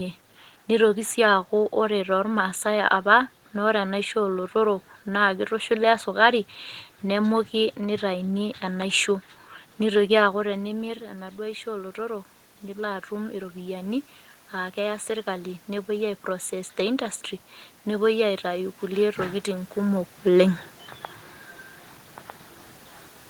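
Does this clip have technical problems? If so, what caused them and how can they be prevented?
Yes. Automatic gain rising runs from 10.43 to 17.26 s. Around 10 s the talker moves away and the level at the microphone drops by about 10 dB, so the automatic gain control slowly adds about 8 dB. Speech and room noise swell together over those seconds. On a waveform the envelope climbs steadily. On a spectrogram the noise floor between syllables brightens along with the speech. A fixed manual input gain prevents this.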